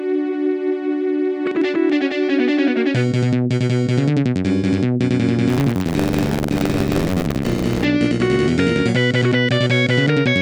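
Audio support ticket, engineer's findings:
Buffer tearing, 5.48 to 7.84 s. Robotic buzz at about 94 Hz, present only with signal, which fits a 512-sample buffer. Probable component: playback ring buffer or driver. App writer and hardware reader slipped and cross each period. Roughly a sixth of each buffer replays audio around 40 ms stale, with hard joins either side.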